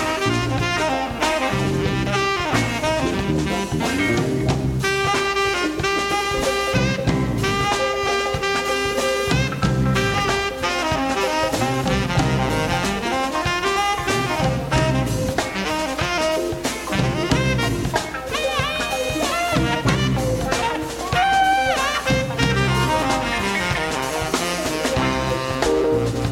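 A ground loop or nearby transformer couples the 60 Hz power line into the signal, so mains hum sits throughout, roughly 25 dB below the audio.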